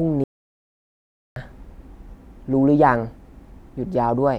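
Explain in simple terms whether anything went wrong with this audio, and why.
At 0.24 s the speech cuts out completely and only returns at 1.36 s, so about 1.1 seconds of talk is missing. That's an audio dropout to silence: the gap is dead silence with no room sound. The input was likely briefly lost while recording carried on.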